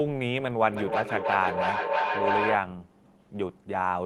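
From 0.72 to 2.69 s, two devices on the same call in one room form a loop: the microphone picks up the loudspeaker, and each trip round adds gain. This is feedback howl. The repeats grow instead of dying away and narrow to a tone near 1 kHz, with a loop delay of about 300 ms. At its peak the howl is about as loud as the speech beneath it, until the loop breaks.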